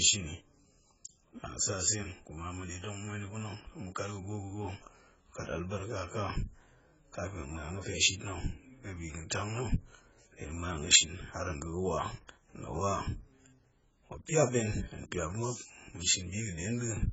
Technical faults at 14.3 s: AAC compression

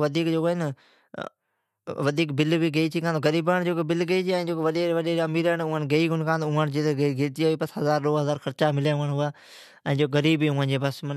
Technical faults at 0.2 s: none

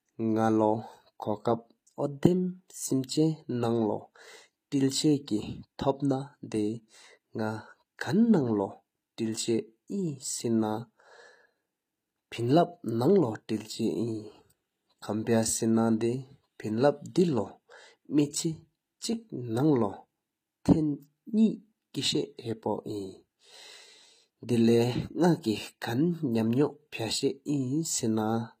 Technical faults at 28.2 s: HE-AAC compression

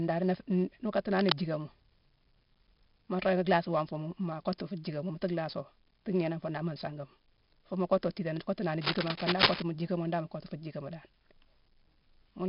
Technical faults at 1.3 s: 4-bit ADPCM compression; cable scratch noise

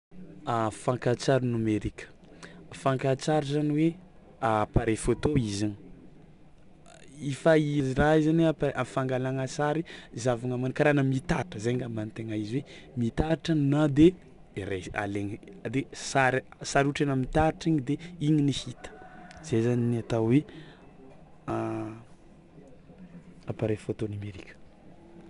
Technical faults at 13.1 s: 4-bit ADPCM compression; dropped buffer (overrun)

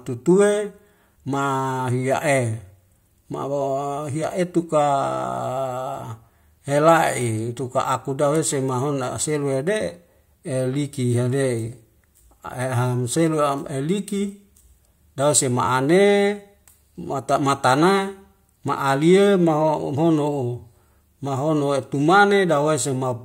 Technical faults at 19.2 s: none

